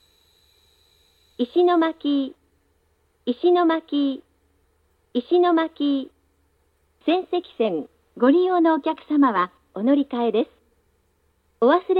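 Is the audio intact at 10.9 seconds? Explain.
Yes, at 10.9 seconds the audio is intact, with no dropout, click, distortion or other fault at that point.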